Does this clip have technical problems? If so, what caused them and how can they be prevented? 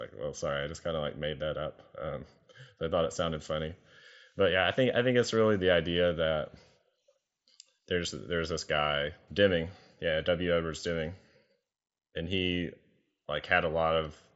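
No, this speech clip has no technical problems.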